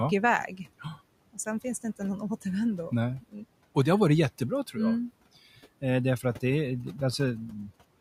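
Speech cut by the noise suppressor at 3.21 to 3.35 s: the suppressor mistook a stretch of speech for background and pulled it down by as much as about 18 dB, so about a tenth of a second sounds swallowed and faint.

GSM signalling bursts from 6.67 to 7.85 s: a nearby 2G phone signalling to its network emits short radio bursts that the audio circuitry rectifies, producing a galloping dit-dit-dit of short 217 Hz buzzes, some 25 dB below the speech.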